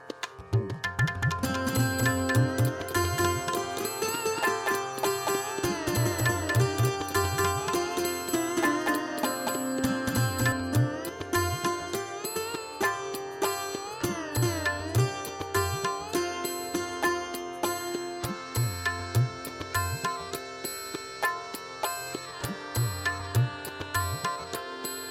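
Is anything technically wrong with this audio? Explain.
Yes. From 1.04 to 10.52 s there is a doubled audio track. A copy arrives about a fifth of a second late, roughly equally loud, likely from a second, slower capture path.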